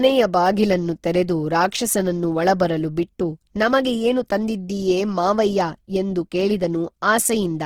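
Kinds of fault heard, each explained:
Opus compression: The speech sounds noisy, rough and grainy throughout, and the damage is plainly audible. Bands seem filled rather than emptied, so there is little swirl. Nothing reaches above about 20.2 kHz. The likely cause is Opus music mode near 16 kbps.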